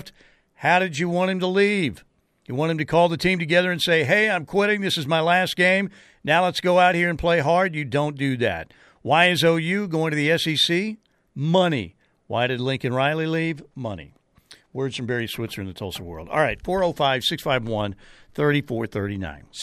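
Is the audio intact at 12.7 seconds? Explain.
Yes, the speech at 12.7 seconds is intact, with no dropout, click, distortion or other fault at that moment.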